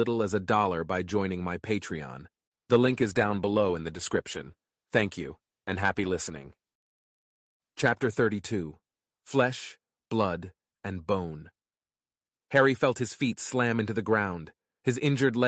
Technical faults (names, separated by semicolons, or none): call bitrate drop